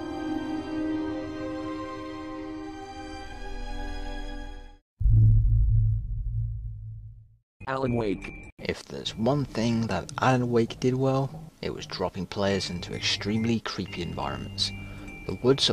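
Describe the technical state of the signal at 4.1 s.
At 4.1 s you're hearing the resampler restarted on every block, which runs through the whole clip rather than just this moment. The conversion, which fits a 48 kHz to 44.1 kHz change, was done 20 ms at a time with no memory between chunks, so each block edge gets slightly wrong neighbouring samples. That leaves a small error every 20 ms, heard as a steady 50 Hz buzz riding under the sound wherever there's signal.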